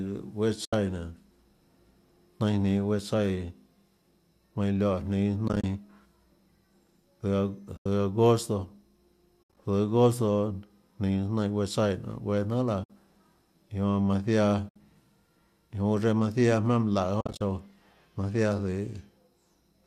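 AAC frame loss with muting leaves soft-edged holes at 0.65, 7.77, 12.84 and 14.69 s, each about 60 to 90 ms long. At 5.48, 9.43 and 17.21 s the holes come as broken clusters spread over 140 to 200 ms. The decoder zeroes the lost frames and fades the sound out and back in. On a spectrogram these show as blank vertical gaps, and on the waveform as tapered dips.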